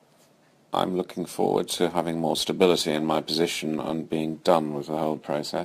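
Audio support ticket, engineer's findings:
Gritty, inharmonic fizz riding on the speech for the whole clip, loudest on strong and sibilant passages; residue roughly 25 dB below signal. Probable component: resampler stage. Crude rate conversion, pattern fits 44.1 kHz to 48 kHz by repeating nearest samples, no interpolation filter. Periodic timing error creates shifted, inharmonic copies of the speech.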